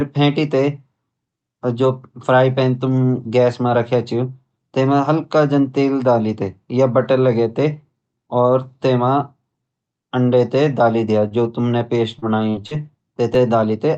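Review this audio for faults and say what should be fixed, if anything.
A short stall from a late packet occurs at 11.28–11.34 s, between "डाली द्या" and "जो तुमने पेस्ट". A packet arrived late and the jitter buffer ran dry. The receiver held the last sound for 29 ms, then resumed. Nothing is lost, but delay grows by 29 ms. A slightly deeper jitter buffer would absorb this.

Short concealed packet loss follows "द्या जो तुमने पेस्ट", at 12.19–12.25, 12.50–12.61 and 12.67–12.74 s. Each time 40 ms of audio never arrived. The receiver extended the preceding sound for 31, 37 and 42 ms, then blended back. Each gap is a brief smear or wobble. Forward error correction or a steadier network path would prevent these.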